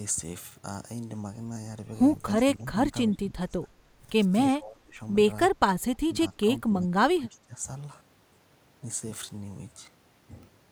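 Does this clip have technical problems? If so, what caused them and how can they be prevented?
Yes. The speech is suppressed in double talk four times: 2.92 to 3.97 s, 4.49 to 5.0 s, 6.07 to 6.46 s, and 6.67 to 7.64 s. The level drops by up to roughly 20 to 25 dB in the first two, and about 15 dB later. The likely cause is an echo canceller that could not separate this talker from the far side's echo and turned both down. To prevent it, use a canceller with proper double-talk detection, or headsets that remove the echo path.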